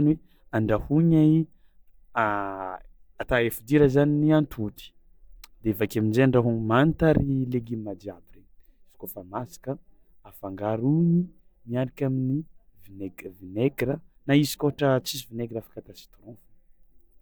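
No technical faults can be heard anywhere in the speech recording. There is nothing in it that calls for a timestamp or a closer listen.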